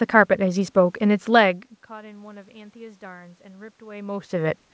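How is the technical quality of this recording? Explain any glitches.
No glitches; nothing sounds wrong.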